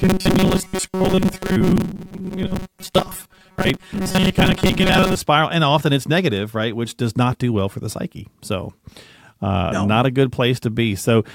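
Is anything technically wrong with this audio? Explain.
Yes. From the start to about 5.16 s, just before "spiral and often it's", the speech has robotic sound from repeated short buffers. It likely comes from audio arriving too slowly, so tiny chunks replay on a loop, forcing a rigid metallic buzz at 188 Hz over most of the section.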